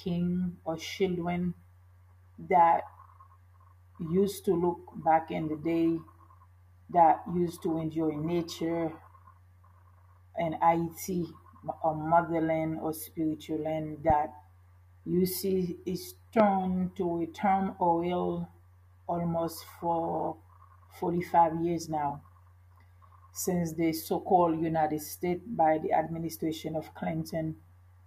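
A loud pop lands at 14.10 to 14.12 s, peaking roughly 10 dB above the surrounding sound, and a second, stronger one at 16.40 to 16.42 s, around 15 dB above it. Each is a single sharp click-thump lasting just over 20 ms, with the sound continuing unbroken underneath. The likely cause is a brief voltage spike, from a switch, connector or static discharge, summed into the signal chain and briefly shaped by the stages after it.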